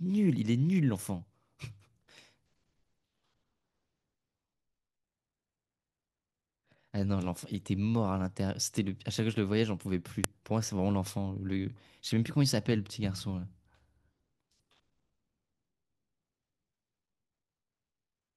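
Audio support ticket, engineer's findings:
Sharp click at 10.24 s in the speech: file header played as audio. A WAV header was likely left in at a join, so its few dozen bytes play as samples and snap.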